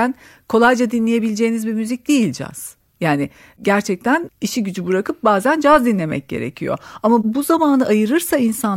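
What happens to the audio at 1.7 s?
Nothing goes wrong at 1.7 s: the speech carries on intact through that moment, with no dropout, click, distortion or other fault to be heard.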